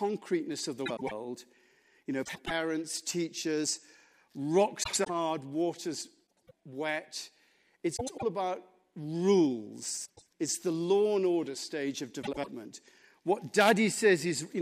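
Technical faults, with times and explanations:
0.86–1.12 s (just after "of the"), 2.24–2.51 s, 4.83–5.10 s (just before "water's wet"), 6.48–6.52 s, 7.96–8.24 s (just before "about rules"), 10.06–10.25 s and 12.22–12.48 s: frames out of order. Each spot is a brief garbled flutter. Two adjacent blocks of about 105 ms each, which fits runs of four frames, were decoded in swapped order. The speech in each stretch plays with its halves exchanged. No time is lost.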